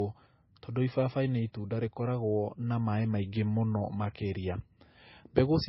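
From start to end, nothing sounds above 5.6 kHz, and two kinds of codec artefact are layered together. The likely cause is transcoding between lossy codecs: low-rate MP3 re-encoded as Opus.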